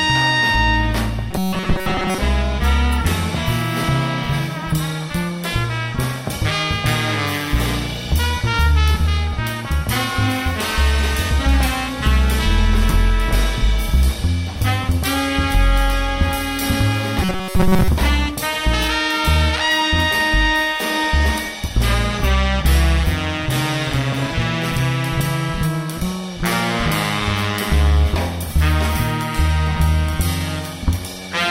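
From 1.31 to 2.18 s, the sound turns into a rigid, metallic buzz. The buzz sits at 188 Hz. This is robotic sound from repeated short buffers. The likely cause is new audio arriving too seldom. A short chunk of about 5.3 ms gets replayed to fill each gap, so most of the real audio is skipped. That chunk's length sets the buzz pitch. The same fault returns from 17.23 to 17.88 s, again at 188 Hz.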